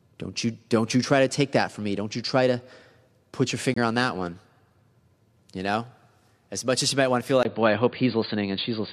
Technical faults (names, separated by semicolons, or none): corrupt frame muted; input switched to a poorer device